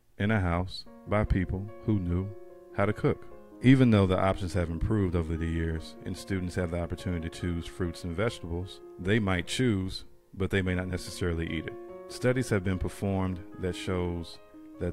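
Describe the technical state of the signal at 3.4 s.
At 3.4 s the signal is intact, with no audible technical fault at that moment.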